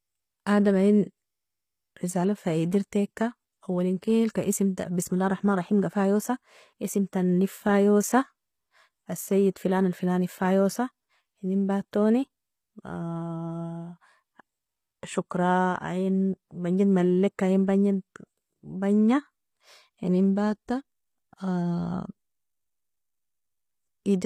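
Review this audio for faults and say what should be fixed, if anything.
Likely HE-AAC compression at a bitrate that fits about 24 kbps throughout: treble is rebuilt from copied lower bands, so s sounds turn gritty, with nothing above 15.5 kHz. Encode at a higher bitrate with a full-band codec instead of relying on spectral band replication.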